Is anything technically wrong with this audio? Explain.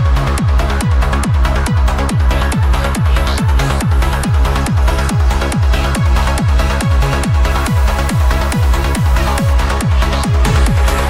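Yes. From 7.51 to 9.53 s the audio turns harsh and buzzy, with a gritty distortion riding on the signal and a hiss-like noise filling any quiet moments. The likely cause is a stuck bit: one data bit held at a fixed value, so roughly half the samples are off by that bit's weight, a step around -30 dBFS. The error follows the waveform, which makes the buzz, and flips with small values near silence, which makes the noise floor.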